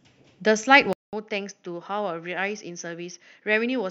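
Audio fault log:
0.93–3.90 s input switched to a poorer device: a 200 ms flat waveform gap, then duller, slightly quieter sound with faint new background noise; spectrogram empty above 6.8 kHz, likely a lower-grade microphone.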